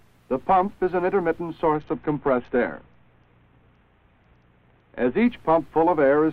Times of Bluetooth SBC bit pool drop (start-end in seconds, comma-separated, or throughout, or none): 1.74-5.26